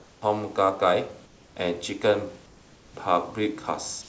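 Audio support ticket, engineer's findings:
Comfort noise in place of the background at 0.00–0.22 s, 1.26–1.56 s, 2.46–2.94 s and 4.02–4.08 s. Pauses turn flat and featureless. Drops of about 5, 3, 4 and 1 dB. Likely cause: discontinuous transmission in the sender. The voice detector stops frames in gaps. The receiver synthesises shaped noise, losing room detail. Band ends near 8 kHz, which fits a G.722 call path.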